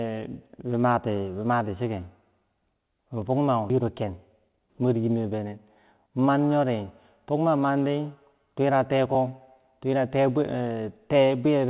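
At 3.7 s there's a skip ahead: about a second of speech just vanishes, with no fill, and the two sides are butted straight together. Audio was dropped while later audio was already waiting, so the talk lurches forward abruptly.

Right after that, from 3.82 to 5.53 s, the jitter buffer speed-up kicks in. It's trimming tiny pitch-period-sized slices over and over to shed around a fifth of a second of built-up delay, so the speech runs at about 113% speed but keeps its pitch. It sounds a bit rushed. It happens again, more briefly, from 6.07 to 6.41 s at about 111%, dropping only a few hundredths of a second.

At 9.15 s there's an underrun with held sample. The output briefly ran dry for just over 2 ms and the converter held its last value flat. Nothing was lost and playback carried on from where it stopped, so it ends softly rather than with a click. All of this sits on a phone-band signal with nothing above 4 kHz, which fits a G.711 mu-law call path.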